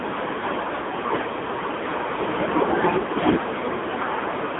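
From start to finish the speech has gone through an AMR narrowband mobile codec, the old 2G/3G phone coder, and it's working hard. Everything sits in a thin band of roughly 150 Hz to 3.6 kHz, with nothing at all above 3.8 kHz. The voice is rebuilt from a vocal-tract model and a sparse pulse excitation, so it comes out buzzy and synthetic. That heavy damage points to one of the low modes, around 6.7 kbps.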